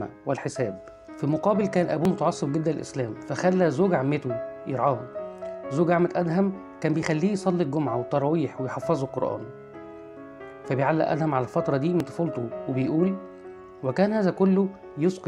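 Audio missing between chunks occurs at 2.05, 7.03 and 12.00 s: three brief skips spaced about 5 s apart, each removing a few tens of milliseconds with the two sides butted together. The steady spacing points to a likely chunked recording or processing stage dropping audio at every handover.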